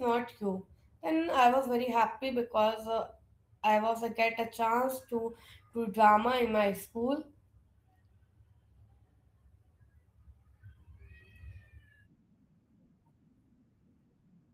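No technical faults can be heard in the speech. The Opus voice compression leaves only a light coding trace while keeping the full band, which fits hybrid-mode Opus at around 20 kbps.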